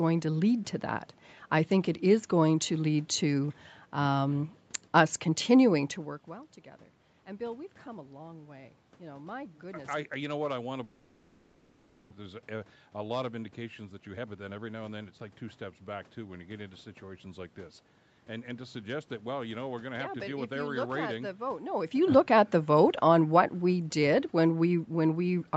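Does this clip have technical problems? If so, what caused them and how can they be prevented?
Yes. From 10.83 to 12.14 s, right after "what I want to", the speech breaks into a fading buzzy continuation of the last sound instead of words, and it resumes at "there's a a lot" with about one second of speech simply gone. This is most likely a long network dropout: no packets arrived, the receiver concealed the gap for about 1.3 s by extending the last sound, and the lost audio was never recovered. Preventing it means a more stable network link, or forward error correction and redundancy for short losses.

From 13.90 to 15.19 s, between "a lot of indications" and "like two steps back", the talking suddenly sounds hurried, about 21 percent faster, yet the pitch stays unchanged. This is jitter buffer speed-up: after the gap the buffer held extra audio, so the receiver cut out short pitch-period slices, roughly 0.3 s in total, to bring the delay back down. 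Smoother packet delivery with less network jitter keeps the buffer from overfilling and avoids this catch-up.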